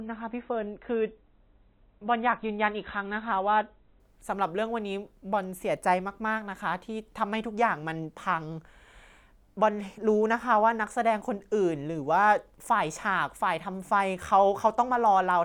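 From 0 to 4.0 s the player begins on a low-bitrate rendition of an adaptive stream, consistent with roughly 24 kbit/s MP3, before stepping up to a higher one near 128 kbit/s. Until 4.0 s the speech has nothing above 4 kHz and heavier codec artefacts, then clears abruptly without a gap.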